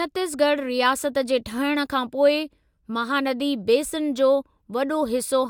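No technical faults can be heard at any point in the speech.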